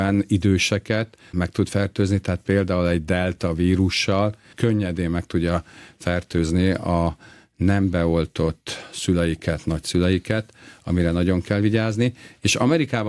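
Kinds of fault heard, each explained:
No technical fault can be heard anywhere in this speech recording. Nothing in the signal path draws attention to itself at any point.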